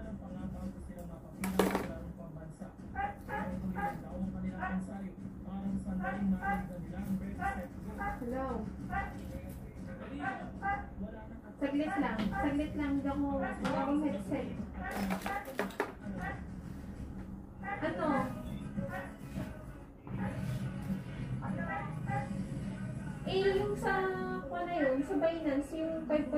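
No technical faults can be heard anywhere in this audio.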